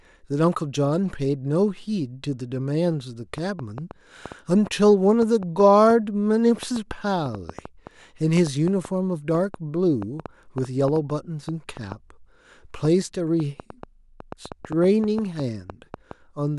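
From 3.38 s to 16.12 s a train of clicks ticks over the speech, about 4.2 per second on average but spaced unevenly, some fifty in all. Each click has much the same sharp popping shape and peaks a few decibels above the speech, so they stay audible through the pauses as well. A pulse repeating like this is likely electrical interference from nearby equipment or a faulty connection or power supply injecting spikes into the signal.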